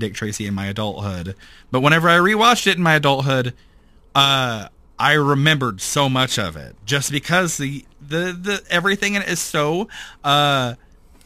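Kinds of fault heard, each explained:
Crude rate conversion: samples dropped without filtering leave a gritty, inharmonic fizz riding the speech throughout, roughly 25 dB below it, which fits a 48 kHz to 44.1 kHz step. Unlike steady hiss, it swells and fades with loud, bright sounds.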